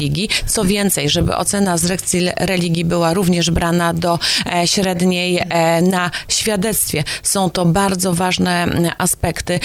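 Resampler restarted on every block, present from start to finish: the conversion from 48 kHz to 44.1 kHz was run on each 50 ms block separately, so at every block boundary the converter lacked the true neighbouring samples and filled its filter with silence or wrapped data. Each edge leaves a small error, and those errors recur 20 times a second, heard as a steady ticking or buzz at 20 Hz that rides on the sound whenever signal is present.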